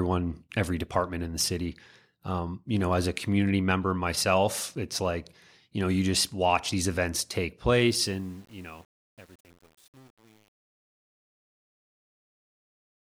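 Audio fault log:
7.87–13.04 s, truncation distortion on a fade: the speech fades out from around 8 s, but the gain stage drops low bits without dither, which fits about 8-bit resolution. From 8.07 s the tail turns gritty instead of dying away cleanly.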